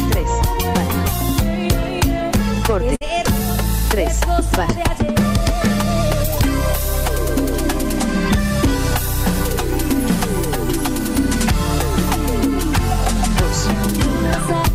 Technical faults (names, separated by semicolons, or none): burst of packet loss